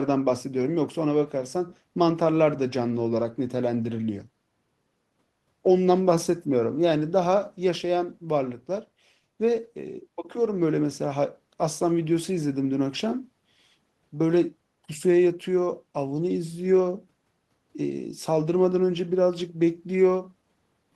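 No technical faults can be heard anywhere in the recording.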